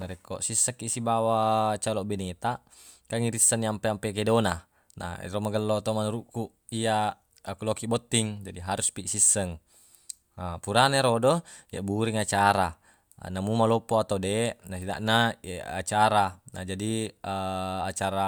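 No technical faults are audible.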